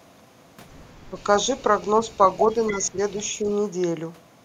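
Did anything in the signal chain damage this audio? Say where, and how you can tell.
Yes. Both faults sit in the call processing. The speech is suppressed in double talk at 1.1 to 1.16 s, 2.7 to 2.98 s and 3.42 to 3.47 s. The voice dips by roughly 5 to 10 dB. This is likely the echo canceller ducking the near talker while both sides speak.

There is also echo leak. A faint delayed copy of the voice, trailing by 279 ms, appears at 1.17 to 1.23 s, 1.57 to 1.9 s, 2.13 to 2.77 s and 3.48 to 3.55 s. It sits around 20 to 35 dB below the speech. This is likely a loudspeaker echo the canceller failed to remove.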